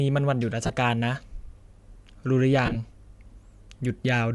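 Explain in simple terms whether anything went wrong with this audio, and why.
Yes, a couple of things went wrong. The whole recording sounds like Bluetooth LC3 compression, the codec used by newer Bluetooth LE Audio earbuds and headsets. That's the likely cause of the clearly breathy, grainy edge on the speech the whole way through. The codec chops sound into very short slices, which fits 7.5 ms frames, and at this quality it throws away a lot of the top end and patches it with noise. You can plainly hear it.

On top of that there are two spots of lost LE Audio frames, where bits of the wireless stream never arrived. The first is at about 0.66 s and lasts around 30 ms. The second spreads over roughly 2.66 to 2.76 s, with the gaps scattered through that stretch and none much longer than 20 ms. In each case the decoder had nothing new to play, so it reused the last bit of sound with its detail scrambled.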